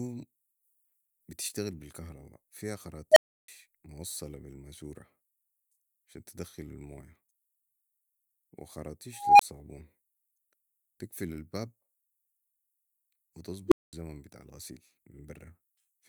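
A tone of around 700 Hz swells into a loud squeal and then drops to silence at 3.12 to 3.48 s, between "بتشتغل بي الكهرباء فيها" and "موصلا بي". It returns at 9.13 to 9.41 s, rising more slowly, and again at 13.68 to 13.93 s near 400 Hz, just before "بتاع الغسيل". This is an unstable filter: a recursive filter with bad coefficients runs away, clips and overflows, leaving gaps of 320 ms, 21 ms and 213 ms until it resets.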